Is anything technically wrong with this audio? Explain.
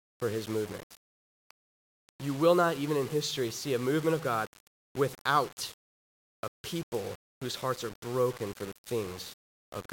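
Yes, there are two faults.

Low bit depth without dither runs through the whole clip. The speech sounds coarse and gritty, with grainy distortion that follows the voice, and its quietest tails break into a rough sputter instead of fading smoothly. The error sits only about 20 dB below the signal. The likely cause is a conversion to about 6 bits with plain rounding and no dither, so each sample snaps to a coarse step and the error tracks the waveform.

Word clock ticks start at 0.66 s, just after "for his", and continue to 9.64 s. Sharp ticks of uneven strength recur at a steady rate of roughly once a second, about ten in all. Their spacing points to a receiving device running on its own clock, off from the sender's by around 30 ppm. Each time the two clocks slip past each other, samples are misread and a single one is dropped or repeated, leaving a tick.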